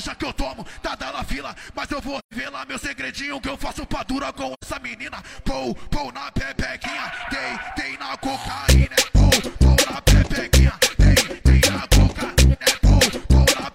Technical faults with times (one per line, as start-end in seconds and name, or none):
2.18-2.34 AAC frame loss with muting
4.53-4.64 AAC frame loss with muting